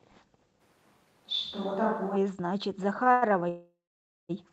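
Speech, with three kinds of fault. From 0.62 to 2.15 s the sound turns roomy and hollow, with thinner bass. The level barely changes. Room noise rises to roughly 35 dB below the speech. This is a switch to a distant microphone. The close microphone's signal was likely lost, so a far pickup carried the sound. The change in and back out is abrupt. At 3.03 to 3.08 s there is a short stall from a late packet. The last sound is held for about 24 ms, with a slight buzz or dip, then resumes where it stopped. Nothing is lost. Two call audio freezes follow. From 3.12 to 3.33 s the sound hangs and is stretched, filling about 101 ms. From 3.49 to 4.31 s the held sound fades into a gap. About 530 ms of that is silence, and the whole pause lasts about 803 ms. The likely cause is packets delayed in transit, leaving the jitter buffer empty. The receiver extended the last sound until data arrived. Speech then resumes from the same point, so it is delayed rather than cut.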